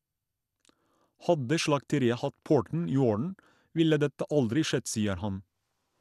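From start to finish, the speech carries plainly audible coding damage. There is nothing above about 12.1 kHz, so it sounds dull and closed in. The remaining highs flicker in and out. A gurgling, granular grit sits on the sound. This is likely MP2 compression at a low rate, consistent with about 80 kbps. The codec split the signal into sub-bands and starved them of bits. Upper bands switched off, and the rest were coarsely quantised.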